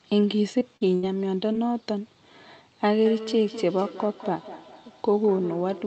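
Packets failed to reach the decoder in time at 0.59 s, 0.77 to 0.83 s and 1.53 s, causing short concealed packet loss. The receiver bridged each hole by extending the preceding sound. The first and last gaps are about 20 ms and register as brief smears or wobbles. The middle one is about 40 ms.

Between 0.95 and 1.05 s a burst of packet loss took out about 80 ms of consecutive audio. The decoder kept synthesising the last sound while fading it, producing a held, dimming buzz or hiss. The audio then resumes further on, with that stretch gone.

From 3.06 s to the end, a feedback echo between two devices appears. A second device in the same room plays the call back into a microphone, and neither echo canceller can remove the other's output. Each phrase returns roughly every fifth of a second, thinner and more ringing, peaking about 14 dB below the direct speech.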